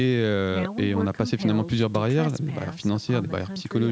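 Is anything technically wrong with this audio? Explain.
No, nothing is technically wrong with this audio.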